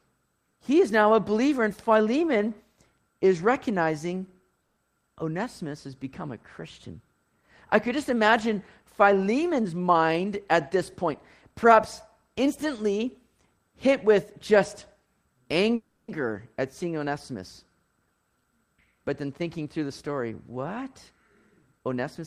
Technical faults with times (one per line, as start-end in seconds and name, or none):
4.61-4.78 call audio freeze
9.50-11.11 jitter buffer speed-up
15.75-16.10 call audio freeze
18.00-19.66 jitter buffer speed-up
21.73-22.20 jitter buffer speed-up